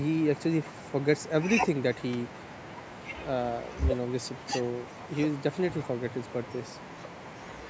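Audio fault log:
2.13 s, electrical switching spike: a sharp snap sits on top of the speech without interrupting it, unlike a dropout; likely an arc from nearby switching.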